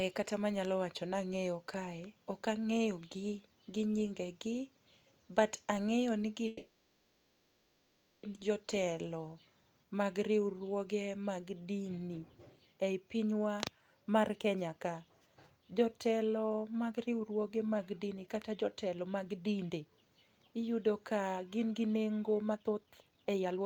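Call audio freeze, 6.47 to 8.26 s, right after "but ang'eyo ni". The speech stops and the last sound is stretched into a fading buzzy hiss that fills about 1.76 s without dropping to silence. Speech then resumes exactly where it left off, with nothing lost. The whole stream now runs about 1.76 s later than before. The likely cause is delayed packets draining the jitter buffer, so the receiver had to invent sound until the late audio arrived.

Jitter buffer speed-up, 14.29 to 14.69 s and again 15.92 to 20.06 s, each at about 110% speed, then 22.53 s to the end after "gin gi nengo", at 140%. Pitch stays put while the speech hurries. The receiver had too much audio queued and trimmed it by cutting many short pitch-period slices: only a sliver in the first stretch, about 0.4 s in the second, and about half a second packed into the final, most rushed second.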